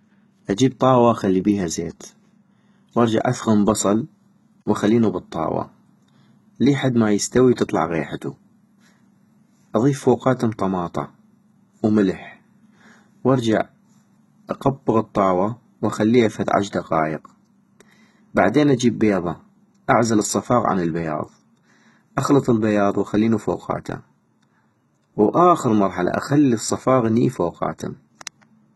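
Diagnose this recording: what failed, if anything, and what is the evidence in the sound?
The failure is at the codec stage, and it runs through the whole recording. The treble has a hard ceiling, with nothing above 11.8 kHz. What sits below that ceiling sounds synthetic. Sibilants come out gritty and lispy, with a metallic sheen, and the damage is heavy. The likely cause is HE-AAC compression at a very low rate, which fits something around 16 kbps. The codec spends its bits on the lower spectrum and rebuilds the upper bands from copies. Their harmonics never line up with the real speech.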